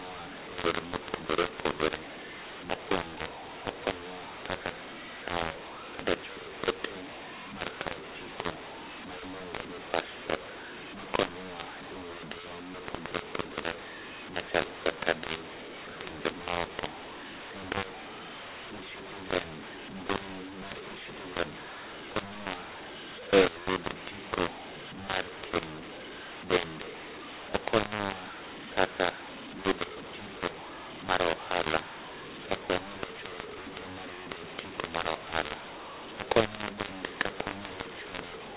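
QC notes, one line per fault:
Throughout, mu-law and A-law mixed up: the telephone speech was coded as A-law and decoded as mu-law. The two laws map the 8-bit codes to different levels, so loudness is scrambled. Some peaks come out too big, other parts too small. The quietest samples land well above silence, so pauses fill with noise. Speech sounds harsh and distorted. The band stops at 4 kHz, as 8,000-sample telephone audio does.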